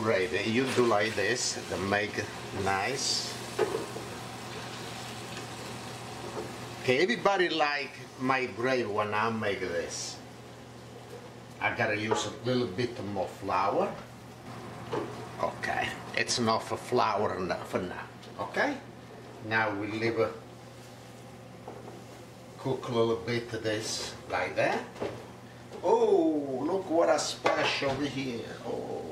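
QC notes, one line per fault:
Nothing to flag here, the audio runs along without a single problem worth writing down.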